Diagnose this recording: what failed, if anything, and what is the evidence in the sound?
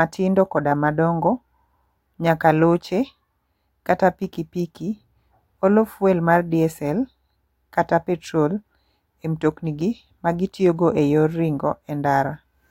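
Nothing failed, and the sound of the speech gives no evidence of a fault at any stage.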